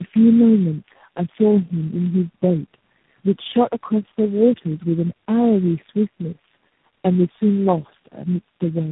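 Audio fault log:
throughout: tandem speech coding. The speech shows the compounded roughness, muffling and warble of several low-rate codecs in series, consistent with four separate speech coders, each re-encoding the previous one's errors. Nothing reaches above 3.8 kHz, which fits narrowband telephone links.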